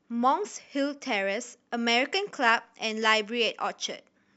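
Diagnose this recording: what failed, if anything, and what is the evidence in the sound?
From 1.78 s to 3.78 s the speech turns thin, bright and hissy, with sibilants spitting forward, then returns to its normal balance. The treble lift is about 8 dB at 10 kHz relative to 1 kHz, and its shape matches the CD 50/15 µs emphasis curve. This is pre-emphasis left on: the treble boost applied before storage was never undone by the matching de-emphasis at playback or conversion, so the boost reaches the listener intact.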